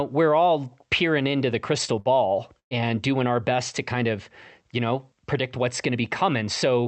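At 1.99 to 2.08 s and again at 2.59 to 2.74 s there is a burst of packet loss. Packets went missing, so the receiver stretched the last sound it had and let it fade. The first gap is filled for about 60 ms. The second runs about 115 ms and decays into roughly 90 ms of silence. Both times the speech picks up later, with about 60 ms and 120 ms skipped. A plain dropout would just cut to silence, but here the held, fading tail and the jump in the speech mark it as concealment. Everything arrives through a WebRTC call path whose Opus coding tops out near 8 kHz.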